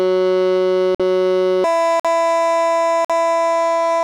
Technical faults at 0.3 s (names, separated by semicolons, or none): none